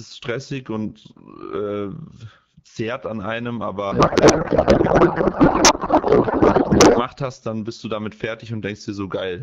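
Speech carried over AMR wideband, its light coding consistent with 12.65 kbit/s. From 3.91 to 7.06 s, after "zehrt an einem", a codec payload misread replaces it with garbled warble and noise until "hast dann bist du". This fits octet-aligned AMR frames being unpacked as bandwidth-efficient.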